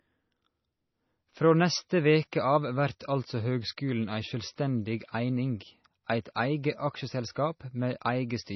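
Speech with heavy MP3 compression damage throughout: nothing survives above 5.9 kHz, and the remaining band sounds watery and swirly as weak frequency lines drop in and out between frames. That points to a likely starved bitrate, consistent with roughly 24 kbps.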